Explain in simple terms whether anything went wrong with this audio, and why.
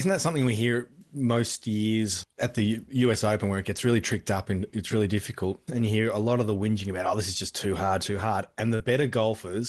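Something did go wrong, briefly, near the end. From about 8.75 to 8.83 seconds there is a short concealed packet loss. Roughly 40 milliseconds of the speech arrived too late to be played. The receiver covered the gap by stretching out the sound just before it, then blended back into the real speech. You hear a quick smear or wobble. The speech was carried over a call connection that keeps sound only up to about 12 kHz.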